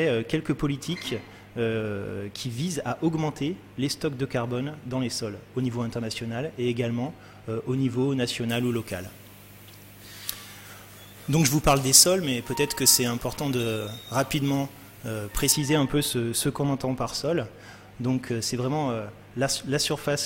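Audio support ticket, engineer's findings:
Pre-emphasis left on, 8.49 to 15.52 s. Treble lift applied upstream, matching de-emphasis never applied. Highs about 14 dB hot at 10 kHz against 1 kHz, a rise that fits the FM 75 µs curve. Thin, bright, sibilant.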